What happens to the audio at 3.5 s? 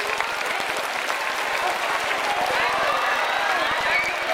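Buffer tearing is present at 3.5 s and runs through the whole clip. The writer and reader of the ring buffer have slipped, so a small slice of each period replays audio from roughly 100 ms earlier, causing a robotic 21.5 Hz buzz that fits a 2048-sample buffer.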